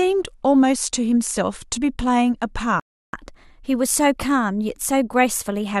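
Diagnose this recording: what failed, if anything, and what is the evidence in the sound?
The speech drops out in a playback stall from 2.80 to 3.13 s, about 0.33 s of dead silence, then resumes where it stopped. The player likely ran dry or its thread was blocked. The waveform shows a flat gap, and the spectrogram an empty vertical band.

Right after, from 3.13 to 5.73 s, the player does a catch-up at higher speed, resampling its backlog at 1.1x. Pitch rises by roughly one and a half semitones, then settles. The spectrogram shows harmonics shifted upward and syllables compressed in time across that span.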